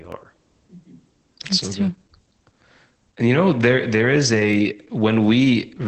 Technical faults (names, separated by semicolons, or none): Opus voice compression; clock drift buffer slips